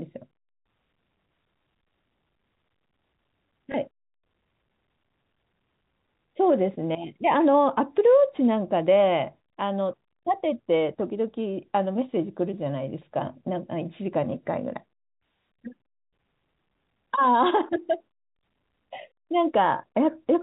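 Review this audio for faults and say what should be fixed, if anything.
At 3.72 s there is a small blip from packet loss with last packet repeated. About 20 ms of audio went missing, consistent with a single dropped packet, and the receiver replayed the previous packet. Adding jitter buffering with proper packet loss concealment, or forward error correction on the G.711 telephone coding stream, would prevent this.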